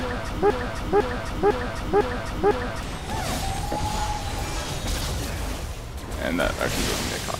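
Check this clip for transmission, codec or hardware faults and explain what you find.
One fault stands out, a broken-record loop. From 0.50 s to 2.83 s, a fragment of about 0.50 s repeats identically five times back to back, stuttering in place. This is likely a stalled player, encoder or stream resending its last buffered piece, so the audio that belonged in that span is lost.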